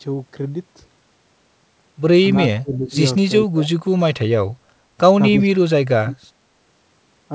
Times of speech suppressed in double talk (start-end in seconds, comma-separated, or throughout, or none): 2.61-3.01, 3.42-3.71, 5.41-6.17